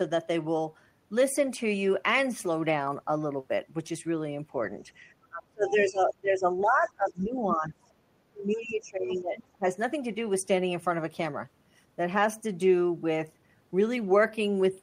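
Between 5.29 and 6.47 s the speech sinks by as much as about 30 dB, and it dips again from 6.63 to 7.92 s by about 20 dB, from 8.32 to 9.38 s by about 15 dB, and briefly from 9.57 to 9.65 s by about 20 dB. This is speech suppressed in double talk, likely an echo canceller turning down the talker while the far side spoke. It differs from packet-loss dropouts because the voice dips, loses its high end or cuts out in pieces while the far side is speaking.

Inside those dips, the other side's voice leaks through twice. From 7.08 to 7.24 s it is very faint, about 40 dB below the speech, and from 8.51 to 8.63 s it is clearer, about 20 dB below. The leak is likely echo that the canceller failed to remove. Unlike reverb, it is a separate second voice rather than a tail on the talker's own.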